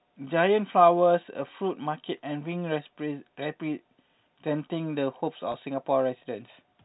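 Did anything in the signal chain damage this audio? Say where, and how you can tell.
Yes. At 5.52 to 5.54 s the speech briefly holds and turns slightly buzzy, a tiny sustained tone where the waveform should keep moving, before it carries on. This is packet loss with pitch repetition at the network stage. About 20 ms of audio never arrived, which fits a single lost packet. The receiver filled the gap by looping the last pitch period, so the loss sounds like a stretched buzz rather than a dropout. The telephone coding itself, G.711 at 64 kbps, limits the sound to below 4 kHz.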